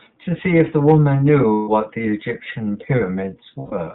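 Speech carried through the iLBC codec: nothing passes above 4 kHz, and the voice has a slightly rough, synthetic edge, which fits iLBC's 30 ms mode at around 13.3 kbps. Unlike wideband codec smearing, the damage is a hard band limit plus grainy excitation. Lost iLBC frames break in at 1.53–1.69 s and 3.59–3.73 s, which fits losses of five and four frames. Each gap becomes a held, buzzy vowel rather than silence or a click, and the voice recovers almost immediately after, unlike codecs whose errors linger.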